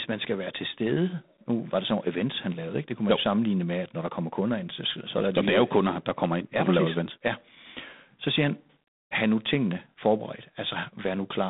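Speech, with G.726 ADPCM damage throughout. The band runs from 150 Hz to 3.7 kHz, with nothing above 3.8 kHz. A harsh, rasping hiss rides on the voice and rises with its level. That coarse difference coding fits a 24 kbit/s rate.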